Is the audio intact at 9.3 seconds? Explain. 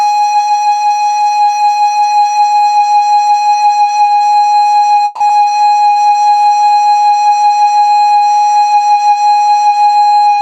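Yes, the music plays through 9.3 seconds without any audible dropout, click or other fault at that moment.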